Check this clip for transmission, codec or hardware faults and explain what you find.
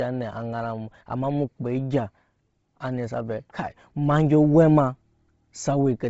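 One codec fault runs through the whole speech clip. Likely Bluetooth LC3 compression at a low bitrate: nothing survives above 7.7 kHz, and noise-filled upper bands leave the voice heavily breathy and grainy, consistent with 24 kbps.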